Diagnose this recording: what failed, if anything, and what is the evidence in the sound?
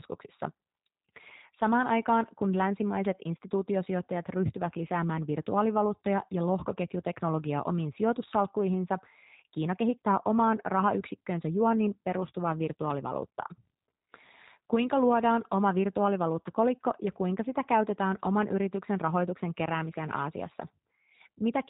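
The codec stage failed: the speech has a G.729 codec sound throughout. Nothing passes above 3.8 kHz. The sound is plainly rough and synthetic, consistent with 8 kbit/s model-based coding.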